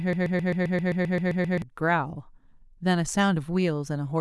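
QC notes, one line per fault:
0.00–1.62 s, broken-record loop: the clip opens with the loop already running, a fragment of about 0.13 s repeating exactly, back to back, 11 times before normal speech takes over. The rigid, stuttering rhythm comes from identical copies joined end to end. This likely points to a stalled player, encoder or stream re-sending its last held fragment, so the speech that belonged in this stretch is missing rather than delayed.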